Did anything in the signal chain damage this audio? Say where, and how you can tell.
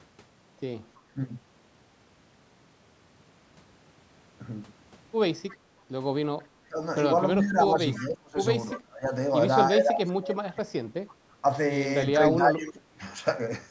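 Yes, the call-processing stage left two kinds of damage. The first is speech suppressed in double talk, likely from an echo canceller that ducked the near talker while the far side was also speaking. At 1.14 s there is a brief dip of about 15 dB. From 6.68 to 13.01 s, repeated cuts add up to roughly three seconds and reach about 25 dB deep. On a waveform these show as sudden notches in the envelope. A spectrogram shows the energy thinning or vanishing across the band in blocks.

The second is echo leak, a faint delayed copy of the voice that the canceller failed to remove, likely because one side plays the call on a loudspeaker. It appears at 5.48–5.55 s, 7.44–8.8 s, 11.08–11.34 s and 12.6–13.13 s. Each copy trails the original by 330 ms and sits about 20 to 30 dB below it. On a spectrogram the harmonic pattern repeats, faint and shifted 330 ms later. The waveform shows a low ghost envelope following each burst.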